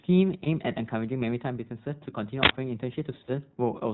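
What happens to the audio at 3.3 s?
Lost iLBC frames at 3.24 to 3.30 s: about 40 ms of packets vanish, consistent with two missing 20 ms frames, and the decoder fills the gap by repeating the last pitch cycle blended with noise, giving a brief held, buzzy vowel before the voice snaps back almost at once. Around it runs the iLBC codec, a narrowband coder that drops everything above 4 kHz and leaves the speech plainly rough and slightly synthetic.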